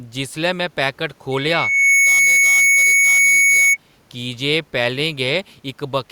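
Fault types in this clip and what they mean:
loudspeaker feedback squeal: The microphone picked up its own loudspeaker, and at 2.2 kHz the loop gain exceeded one, so that tone fed on itself. From 1.32 s it swells in under a second to around 10 dB above the speech, stopping at 3.77 s, just before "की जे".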